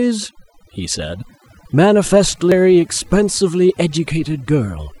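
From the very start there's overdone noise removal on the speech. The denoiser was pushed too hard, so bands sitting near its noise estimate get pulled right down, taking the softer parts of the voice with them. You get near-silent gaps sprinkled with twinkly specks.

At about 2.52 s there's a brief blip from damaged data in the compressed stream. Some of the encoded data there was corrupted, so the decoder misread that spot and had to hunt for the next good frame, which leaves that short blip.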